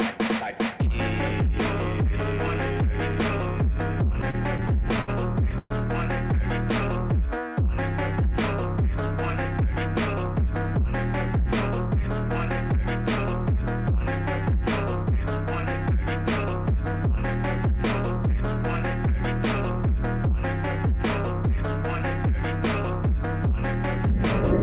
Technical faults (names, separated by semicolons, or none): repeated stalls (stutter); jitter buffer slow-down; jitter buffer speed-up